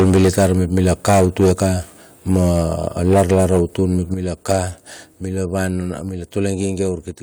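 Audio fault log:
0.0–1.72 s, 2.3–2.62 s, 3.03–3.81 s, 4.49 s: microphone overload. The loudest speech peaks are flattened, giving a harsh, crackly edge. The input is driven about 9 dB past full scale at the start, about 3 dB at 2.3 s, about 8 dB at 3.03 s and about 6 dB at 4.49 s. Up to roughly a tenth of samples are squared off, likely from converter clipping caused by excessive input gain.
3.14 s, 4.14 s, 6.09 s, 7.11 s: microphone volume stepped down. Speech and background drop abruptly in single steps of about 2, 7, 3 and 4 dB. The first step lands inside the distorted passage and the second follows soon after it. This is likely the call software's gain control reacting to the overload by cutting the device input level in discrete increments, so the speech grows progressively quieter.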